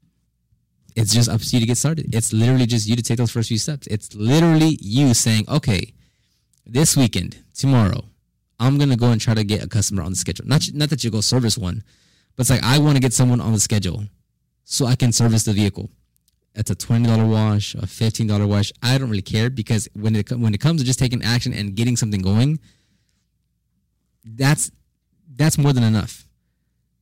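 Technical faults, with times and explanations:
Throughout, hard clipping: the speech is driven about 13 dB beyond what the stage can pass, so roughly one sample in twenty is cut flat, giving a harsh fuzz on loud sounds. Unlike soft saturation, the flat tops end abruptly, which adds bright, gritty high harmonics instead of a gentle rounding.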